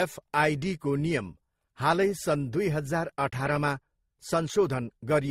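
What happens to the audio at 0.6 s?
At 0.6 s the speech carries stacked coding artefacts that run through the whole clip, likely from transcoding between lossy codecs. Each pass re-encoded the previous pass's damage, so different artefacts are heard together rather than one consistent texture. That mixture of different artefacts, not a single signature, sets it apart from one low-bitrate encode. The sound points to AAC and MP3 stages at around 48 kbit/s ending in Opus near 32 kbit/s. Nothing remains above 20 kHz.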